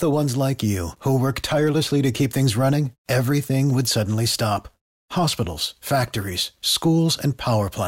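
Nothing to report: no technical faults are audible at any point in the speech recording.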